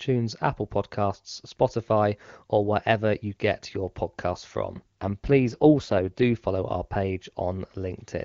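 From 4.74 to 6.35 s, an AMR rate drop roughens the speech, which fits 8.85 kbit/s. Unlike packet loss, there is no gap, and the band stays full.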